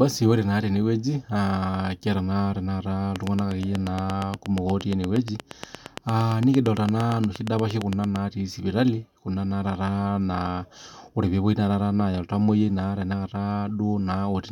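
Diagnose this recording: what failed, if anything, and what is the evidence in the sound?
A train of clicks runs through the speech from 3.16 s to 8.17 s: about forty near-identical sharp ticks at a steady 8.6 per second, standing well above the speech and audible in the pauses too. The stage is likely the analogue wiring or the interface, with nearby equipment coupling a repeating pulse into the signal. On a spectrogram this shows as evenly spaced thin vertical lines across the full band; the waveform shows matching narrow spikes.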